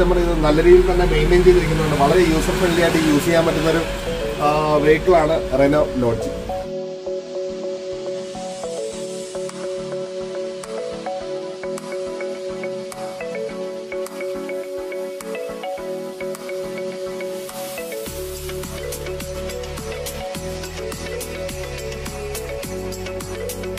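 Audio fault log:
No faults detected in this clip.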